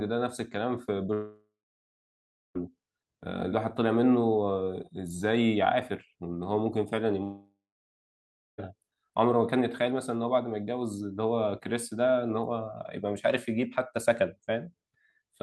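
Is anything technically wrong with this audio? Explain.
Yes. Two long network dropouts occur in this speech, at 1.13 to 2.57 s and 7.23 to 8.60 s. Audio likely stopped arriving for about 1.4 s each time, so the receiver stretched the last sound into a fading buzz, then about 1 s of silence, before the speech resumes with that stretch lost.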